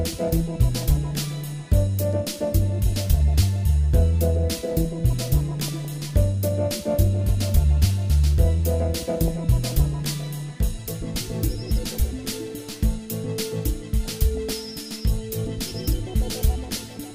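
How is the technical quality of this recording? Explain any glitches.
The recording is marred by three bursts of DAB burbling, at 5.68 to 5.98 s, at 9.28 s, and at 14.05 to 14.71 s. Weak reception let a small fraction of bit errors slip past error correction into the MP2 data, so corrupted samples put short blips of noise in single sub-bands. The longest, at 14.05 s, points to roughly thirty damaged frames.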